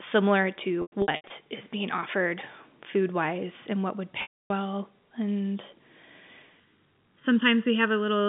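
Packet loss with pitch repetition occurs from 0.82 to 1.30 s, just before "is being offered food". About 280 ms of audio goes missing in bursts spread across 480 ms, with the longest run 100 ms, which fits 20 ms packets. For each gap the receiver loops the last pitch period and fades it over roughly 50 ms. The short holes sound like brief buzzy sustains, and the 100 ms run decays toward silence before speech cross-fades back in.

The same packet loss with pitch repetition returns from 4.22 to 4.50 s, right after "wise and what would". Here the 280 ms loss is one continuous gap. The repeated pitch period sustains as a buzzy tone, fades out well before the gap ends and leaves a stretch of silence. Speech then cross-fades back in.

Channel delay (comb filtering) runs from 6.60 s to the end. One channel trails the other by under a millisecond, and the pair is summed to mono. Content common to both cancels at evenly spaced frequencies, with the first notch around 700 Hz and further notches repeating up through the telephone band of this G.711 A-law line. 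The result is a hollow, phasey tone.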